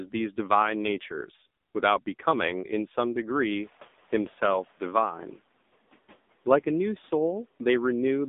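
Speech that sounds buzzy, thin and synthetic from start to finish, boxed into roughly 200 Hz to 3.7 kHz with nothing at all above 3.8 kHz. This is the AMR narrowband mobile codec: it rebuilds the voice from a vocal-tract model excited by sparse pulses, and the heavy damage fits one of its low modes around 6.7 kbps. From 3.35 s to 5.39 s the room noise, which jumps by about 25 dB near 3.5 s, comes through with less reduction at first and then gradually sinks by about 8 dB over roughly 2 s. This is the noise suppressor catching up: its estimate of the background lagged behind the sudden rise and needed that time to adapt before applying full reduction.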